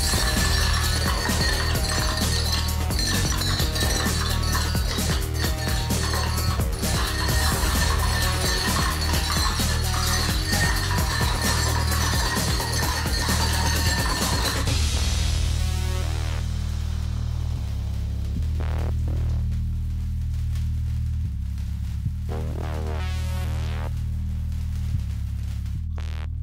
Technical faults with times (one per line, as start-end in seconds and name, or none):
none